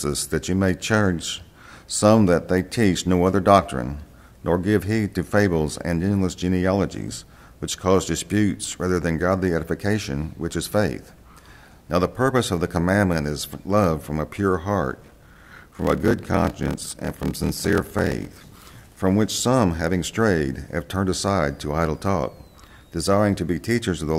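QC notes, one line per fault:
14.91–18.66 s, block size mismatch (padded): a steady buzz at about 38 Hz, with the sound dragging to 0.889 times its speed at nearly unchanged pitch. Each block read is longer than the block written, which fits 1024 samples, so zeros fill each gap.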